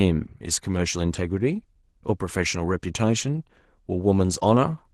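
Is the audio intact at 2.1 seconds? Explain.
No, at 2.1 seconds you're hearing Opus voice compression, and it runs through the whole clip rather than being a local glitch. The codec is in hybrid mode: a linear-prediction coder handles the band up to 8 kHz and a transform layer covers the top. The excitation is coded coarsely, which fits a rate around 16 kbps, so the speech comes out plainly hoarse, muffled and a bit robotic.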